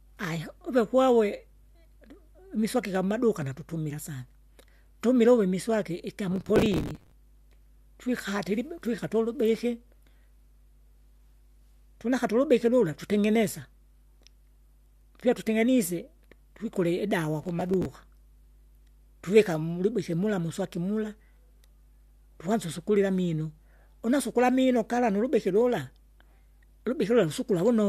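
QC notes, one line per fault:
Throughout: mains hum. Power-line interference, likely from a ground loop or nearby transformer, is coupling into the signal path and adds a steady 50 Hz tone with low harmonics under the speech, sitting about 30 dB below it.
6.32–7.12 s and 17.44–17.86 s: processor overload crackle. The processor repeatedly failed to finish its small audio buffers on time, roughly 5 ms each, and each miss replayed a scrap of old audio with hard edges. Roughly 50 and 15 of these across each stretch make a gritty tearing crackle over the speech, which stops once the load passes.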